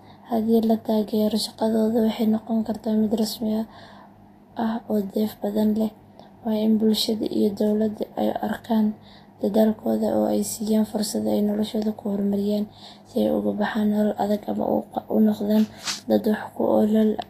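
A speech recording carries plainly audible codec damage from start to finish. Nothing is present above 14.2 kHz. The upper band sounds grainy and hissy rather than clean. Attacks are blurred and tones are roughened. The likely cause is Vorbis compression at low quality, which fits a bitrate of about 33 kbps. At that rate the encoder lowers its cut-off. It also quantises the treble residue so coarsely that fine detail turns into noise.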